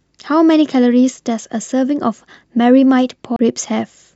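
At 1.72 to 1.74 s there's a small skip from an overlap between stream segments. Two pieces of the stream claimed the same stretch of time, so the player trimmed about 20 ms that wasn't actually duplicated, and the waveform jumps across the seam.

Then around 3.36 to 3.39 s you get a CD skip: a brief dropout of roughly 30 ms, after which the speech carries on from a different spot, because the laser hopped to another turn of the disc's spiral.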